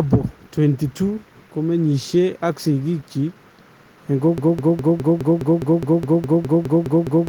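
At 4.38 s the speech locks into a broken-record loop. A 207 ms fragment repeats exactly, back to back, about 14 times until the clip ends at 7.29 s. Whatever should have played there is gone. A stalled player or stream likely kept resending its last buffer.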